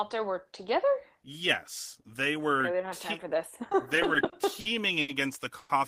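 From 3.95 s to 5.10 s the speech shows repeated stalls, a stutter. The flow halts seven times. Each halt is filled by a continuation of the last sound, 190 ms in total, with the longest fill lasting 70 ms. That is about 17 percent of the span. Packets were arriving late or too slowly. The jitter buffer kept running dry. Nothing is lost, but the speech drags and catches.

At 5.58 s comes a call audio freeze lasting until 5.71 s. The last sound is stretched for 110 ms instead of moving on. It does not drop to silence. The likely cause is packets held up in transit, adding 110 ms of delay. The jitter buffer emptied, so the receiver extended what it had. When the packets arrived, the speech resumed where it stopped. A gap was inserted and nothing is missing.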